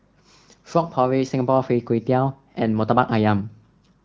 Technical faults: none

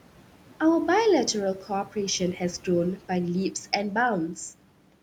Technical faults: noise suppressor artifacts; speech cut by the noise suppressor

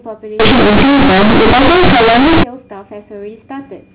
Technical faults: companded audio read as linear

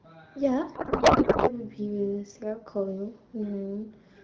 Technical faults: codec payload misread

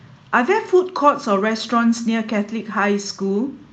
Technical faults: none

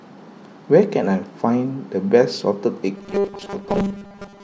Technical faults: robotic sound from repeated short buffers

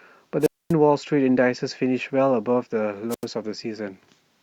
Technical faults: wireless microphone squelch dropout

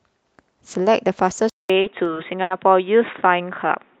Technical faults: input switched to a poorer device; repeated stalls (stutter)

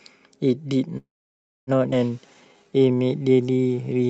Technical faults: call audio freeze; skip ahead; jitter buffer slow-down

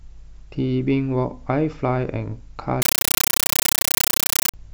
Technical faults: compressed stream played as audio

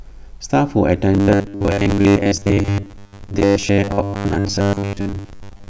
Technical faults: robotic sound from repeated short buffers

